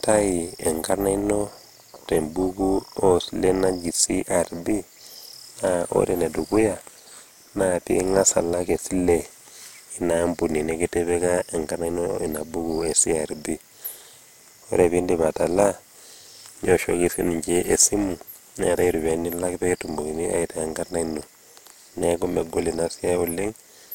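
From start to finish, the speech carries overlap-add ripple. The audio was split into windowed frames and rejoined with an overlap whose gains fail to sum evenly, so the level dips and swells once per frame, by about 6 dB, at a rate of around 300 Hz. That fast ripple gives a metallic buzz. Unlike mains hum, it adds no fixed tone of its own: it modulates the speech itself, adding extra tones around each sound, and vanishes in silence.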